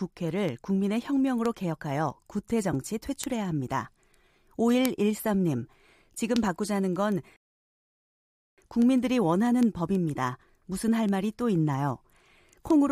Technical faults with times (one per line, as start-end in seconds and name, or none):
7.36-8.58 rebuffering stall